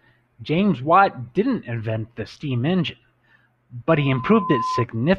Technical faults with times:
3.96-4.85 loudspeaker feedback squeal

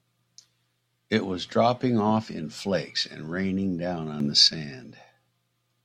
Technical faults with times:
4.20-4.48 sudden gain jump

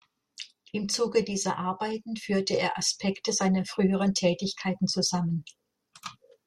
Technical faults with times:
none

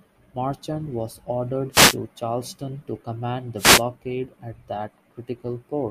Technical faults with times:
1.71-1.97 wireless microphone noise hit
3.56-3.83 wireless microphone noise hit

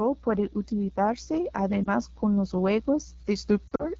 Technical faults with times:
0.00-3.99 AMR wideband (HD Voice) codec
1.83-1.88 lost AMR speech frames
3.67-3.85 lost AMR speech frames

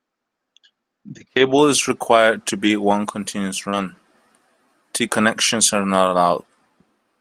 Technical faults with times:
1.45-1.51 lost packet rebuilt from error correction
2.63-2.69 lost packet rebuilt from error correction
3.69-3.76 short concealed packet loss
3.72-3.83 lost packet rebuilt from error correction

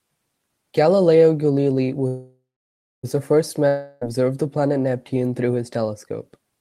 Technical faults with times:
2.07-3.05 call audio freeze
3.68-4.05 long network dropout

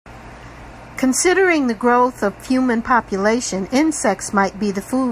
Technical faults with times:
none

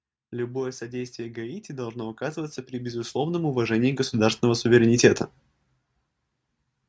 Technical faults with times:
0.00-6.89 sample clock jitter
0.79-5.14 automatic gain rising

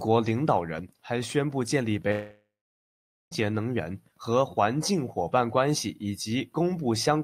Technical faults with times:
2.11-3.33 long network dropout

